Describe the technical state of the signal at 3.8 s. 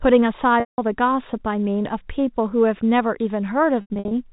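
At 3.81 s you hit packet loss with pitch repetition, running to about 4.11 s. Roughly 210 ms goes missing in bursts over that 300 ms stretch. The receiver loops the last pitch cycle to paper over each hole, so you hear a brief buzzy hold. The longest 90 ms gap fades toward silence before the speech cross-fades back in, all within the usual 4 kHz telephone band.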